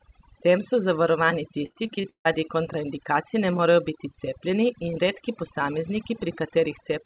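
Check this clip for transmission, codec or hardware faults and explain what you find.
Two faults are audible: heavy noise removal across the whole recording, and a burst of repeated packet loss early on. The speech arrives through a call path whose band stops at 4 kHz, consistent with G.711 mu-law at 64 kbps.

Overdone noise removal runs from start to finish. The suppressor was set too aggressively, so any frequency band it judged close to the noise floor was pulled far down or switched off entirely, and the softer components of the speech were removed along with the noise. Between phrases the background falls to near silence dotted with twinkling, chirpy specks, and the voice itself loses the low-level detail that normally fills it out.

Repeated packet loss (robotic sound) occurs from 1.66 s to 2.27 s, between "tem so zavarovani" and "kontraindikacij ne morejo biti". The pattern points to about seven separate dropouts in quick succession, the longest lasting 155 ms. 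The receiver covered each hole by extending the last decoded sound. That patching filled about 289 ms and left about 300 ms simply missing, so roughly half the span is synthetic. The result is choppy speech with fragments absent.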